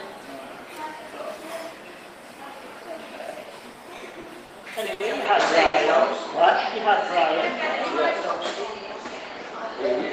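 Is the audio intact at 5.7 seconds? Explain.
No. Two faults overlap there. From 5.25 s to the end, the sound turns duller and boxier, with a level shift of roughly 5 dB and a faint new background noise around 40 dB below the signal. The input likely switched to a poorer device. The change is abrupt, with no silence at the switch, and it comes with a new tone and noise floor. That sets it apart from a simple low-pass filter, which would only remove the highs.

Inside that span, from 5.66 to 5.76 s, there is a short stall from a late packet. The jitter buffer ran empty, so the receiver held the last sound for 80 ms until the packet arrived, then carried on from the same point. The sound drags, held too long, but nothing is lost. A dropout would instead leave a gap or skip ahead.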